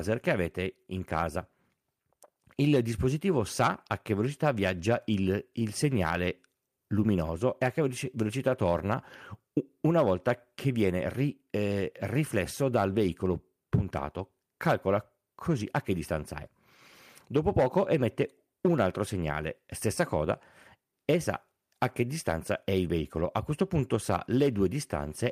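Nothing technically wrong can be heard anywhere in this recording of speech: the signal holds steady throughout with no interruption, distortion or other disturbance to point to.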